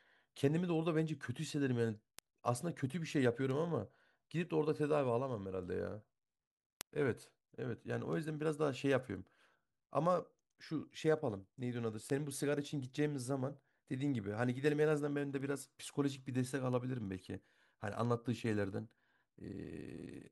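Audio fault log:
0.20–20.04 s, word clock ticks: about 30 sharp, uneven ticks roughly every 0.7 s, as an unlocked receiver clock drifting around 30 ppm slips single samples.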